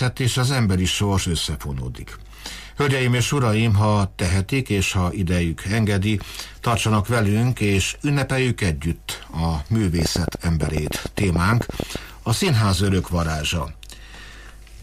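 From 9.99 to 11.97 s, a train of clicks ticks over the sound at about 10.7 per second, unevenly spaced. There are around twenty, peaking about 15 dB above the audio, likely from electrical interference.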